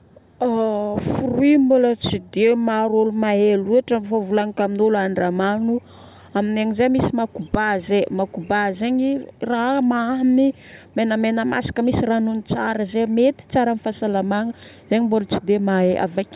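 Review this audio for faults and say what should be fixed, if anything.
No faults; nothing to fix.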